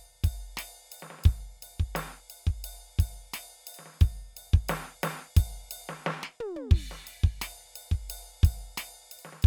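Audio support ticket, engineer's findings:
Music clip checked by ear: no faults found.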